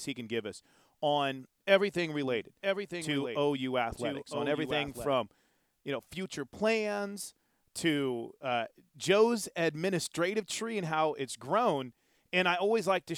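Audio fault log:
2.28–5.14 s, doubled audio track: just after "give us on everything", a second full-band copy of the speech runs about a second behind the original, roughly 5 dB quieter. It carries no reverberant tail or room colouring, so it reads as a detached repeat rather than an echo, and it cuts in and out abruptly at both ends. The likely cause is the same signal reaching the mix twice, once through a slower capture or processing path.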